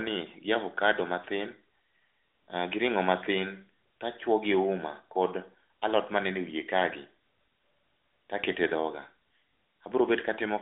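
No technical faults occur anywhere in the clip, so there is nothing to place in time order.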